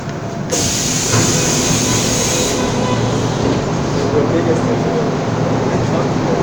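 At about 1.98 s there is a brief burst of damaged data in a compressed stream. A short stretch of the encoded file was corrupted, so the decoder misread the frame there, lost sync and had to hunt for the next valid frame header. It comes through as a quick chirp or blip. On a spectrogram it shows as a thin vertical smear of broadband energy; the waveform shows a tiny discontinuity.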